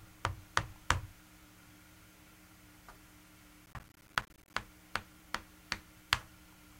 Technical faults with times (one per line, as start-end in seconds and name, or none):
3.66-4.54 processor overload crackle